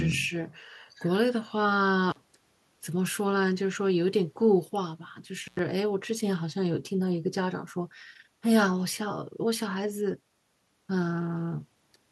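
An intermittent contact, a loose cable or plug briefly opening the signal path, breaks the speech twice: at 2.10 to 2.17 s, open for about 39 ms, and at 5.45 to 5.59 s, open for about 93 ms. Each dropout leaves faint hiss between crackles at its edges.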